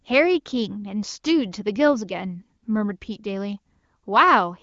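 No technical faults can be heard in the speech, which carries the band limit of an AMR wideband (HD Voice) codec, with nothing above about 7.3 kHz.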